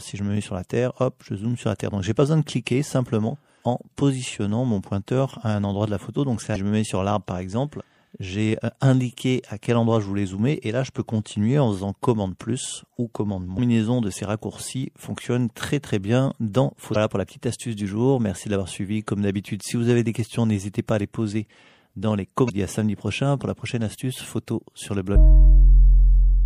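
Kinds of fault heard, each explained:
MP3 compression: The whole clip has that watery, swirly quality you get when a perceptual encoder runs out of bits. The top end is cut off flat, and the quieter detail keeps flickering in and out from frame to frame. Bright, hissy content picks up small metallic chirps, and sharp attacks sound smeared. The damage is easy to hear and most likely comes from MP3 at a low rate, around 64 kbps.
Damaged data in a compressed stream: Five short glitches where the decoder hit bad frames, lost its place, and had to hunt for the next valid header. Each one comes out as a quick squawk or blip. They fall at 6.52 to 6.56 s, 13.55 to 13.59 s, 16.92 to 16.96 s, and 22.46 to 22.50 s, with a very brief one at 25.15 s. Each lasts roughly 40 ms except the last.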